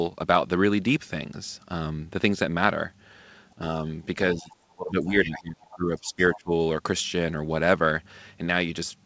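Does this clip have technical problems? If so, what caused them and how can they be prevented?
Yes. The speech dips by about 10 dB at 3.56–3.61 s, then by up to about 25 dB from 4.34 to 6.51 s. This is likely speech suppressed in double talk, where the echo canceller attenuated the near talker while both sides spoke. Tuning the canceller's double-talk detection or using full-duplex hardware with better acoustic isolation prevents it.

From 6.33 to 6.4 s a faint second voice, about 20 dB below the speech, comes through. This is likely the other side's voice leaking through from the loudspeaker as residual echo the canceller missed. Headphones, or a longer and better-converged echo-canceller filter, prevent it.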